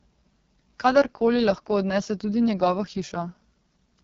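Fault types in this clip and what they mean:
AMR wideband (HD Voice) codec: The whole clip has been through AMR-WB, and at a very low rate. The roughness fits the lowest 6.6 kbit/s mode. The codec rebuilds the speech up to 6.4 kHz from a simple pulse-driven model of the vocal tract and pads the band just above with shaped noise, so nothing reaches past about 7.3 kHz. Squeezed this hard, the voice comes out rough and raspy, with heavy coding damage throughout.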